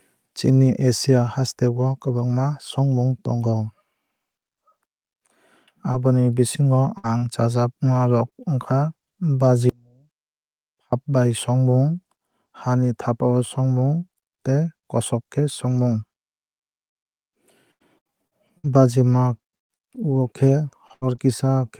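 Speech runs through three distinct faults. Between 5.91 and 8.33 s, scattered short gaps appear: roughly four brief holes, none much beyond 50 ms, each patched by stretching the preceding sound. They register as isolated ticks or smears, with the speech remaining clear between them, which separates them from sustained packet loss. From 9.69 to 10.93 s, an audio dropout to a faint residue lasts 1.23 s. The signal cuts off abruptly, leaving only a faint trace about 35 dB below normal. That live residue and the hard edges, rather than a fade or true silence, distinguish it from a natural pause, and it likely stems from a break in the signal path upstream of a still-active input. Finally, from 15.37 to 21.19 s, repeated packet loss produces robotic sound: around fifteen gaps, the longest 110 ms, with about 11% of the span concealed. The holes arrive close together, so each repair is soon followed by another hole, producing a choppy, robotic texture rather than occasional hiccups.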